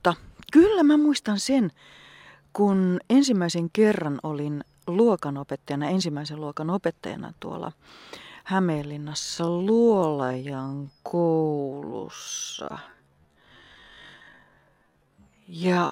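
At 9.18 s the speech abruptly drops to half speed (0.5x) and stays slowed to the end of the clip, yet its pitch does not fall. This is a time-stretched section, likely from software lengthening the audio to fill a set duration by repeating short slices, which makes it drag. On a spectrogram the harmonic spacing stays the same while each syllable's pattern spreads to about twice its width, and the waveform shows broadened envelopes.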